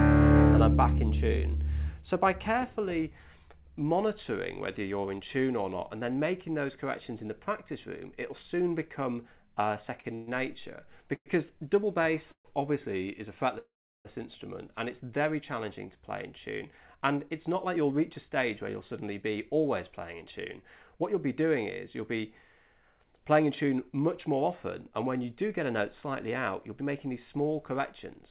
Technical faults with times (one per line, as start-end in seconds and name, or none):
10.00-10.13 short stall from a late packet
10.15-10.29 call audio freeze
11.15-11.28 call audio freeze
12.31-12.47 call audio freeze
13.59-14.07 call audio freeze
16.71-21.02 jitter buffer speed-up
22.75-28.31 jitter buffer speed-up